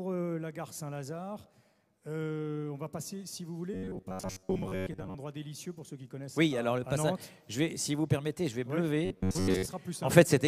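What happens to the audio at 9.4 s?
From 9.05 to 9.66 s the audio turns into robotic sound from repeated short buffers, a rigid metallic buzz near 94 Hz. It is likely caused by roughly 11 ms chunks being replayed in place of most of the real signal. Unlike a dropout it never goes silent, and the repeats fuse into a fixed pitch instead of audible stutters.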